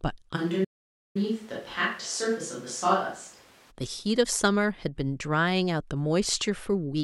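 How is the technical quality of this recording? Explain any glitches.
Two glitches overlap near the start of this speech recording, one a change of pickup and one a dropout.

From 0.38 s to 3.70 s there's what sounds like a switch to a distant microphone. The close mic's signal most likely dropped out, leaving a mic further from the talker. The sound goes roomy and hollow, thins out in the bass, and drops about 5 dB, with background noise sitting roughly 25 dB under the speech. Both the change in and the return to the close sound at 3.70 s are abrupt.

Inside that stretch, from 0.64 s to 1.17 s, there's a playback stall. The audio just stops mid-flow and goes silent for 0.51 s. That's likely the player running short of data or its audio thread getting blocked, so nothing reached the output until it caught up. It then picks up again in the same distant, roomy sound.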